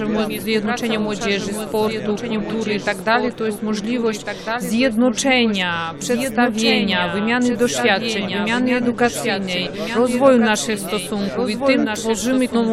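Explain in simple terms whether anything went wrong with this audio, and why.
Doubled audio track, throughout the whole clip: a second copy of the sound runs about one and a half seconds behind the first, a bit quieter but otherwise identical. This most likely comes from the audio being recorded twice through a slower path, so both copies ended up mixed together.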